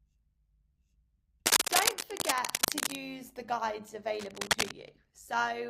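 Overlap-add ripple runs through the whole of this speech clip. The level pulses by about 6 dB at a rate of around 100 Hz, which gives the voice a metallic buzz with extra tones around each note. The audio appears to have been split into windowed frames and reassembled with an overlap whose windows do not add up to a steady gain, so the loudness dips and swells once per frame. Cable scratch noise also appears in two bursts, from 1.46 to 2.95 s and again from 4.12 to 4.78 s. Dense, irregular crackling and rustling sit on top of the speech, somewhat louder than it in the first burst and roughly level with it in the second. The likely cause is a worn cable, connector or control being moved, so that its contact resistance jumps about rapidly and injects this noise into the signal.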